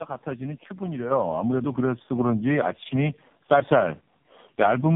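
From the start to the end of the clip, the speech carries the marks of tandem speech coding. It sounds rough, muffled and warbly, which fits three speech coders in a row, each squeezing the already squeezed output of the one before, with low-rate AMR narrowband coding at the end. On a spectrogram nothing appears above 3.8 kHz, and the harmonics look smeared and patchy where each stage discarded more detail.

At 1.11 s the microphone volume stepped up by about 7 dB, and at 2.13 s it stepped up again by about 3 dB. Each time the call software judged the input too quiet and raised the device gain in one jump, so voice and background get louder together. On the waveform the envelope widens abruptly at both points, and a spectrogram shows the whole picture, noise floor included, brightening at once.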